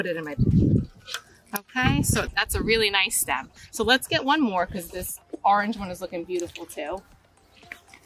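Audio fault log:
No faults heard anywhere in this recording.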